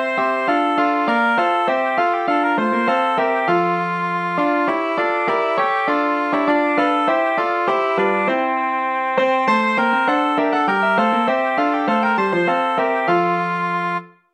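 The audio runs at double speed from start to finish, with everything pitched a full octave high. This is a wrong sample rate fault. The samples are being played back at twice the rate they were captured at, with no conversion between the two. Timing and pitch therefore shift together by the same factor. The 2.0 ratio fits material recorded around 22 kHz and played at 44.1 kHz. The whole clip is affected evenly.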